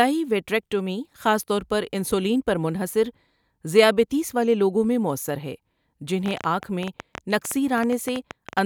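From 6.26 s to 8.59 s a train of clicks ticks over the speech: some twenty sharp, near-identical pops at an uneven pace averaging 9.46 per second, peaking about 10 dB above the speech. Likely cause: nearby interference or a faulty connection or power supply injecting repeated pulses.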